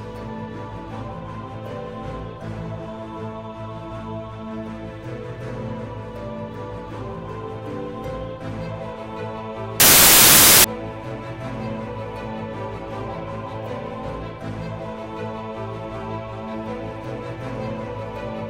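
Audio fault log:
9.80–10.64 s, samples built from the wrong bytes: misassembled sample bytes push fast-changing low bits into the high positions, producing a burst of loud, harsh broadband noise.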